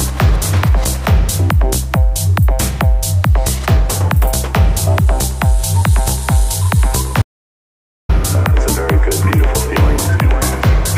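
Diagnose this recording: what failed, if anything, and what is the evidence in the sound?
Audio dropout to silence, 7.22 to 8.09 s: the waveform flatlines to silence and the spectrogram goes blank, likely from a lost input link.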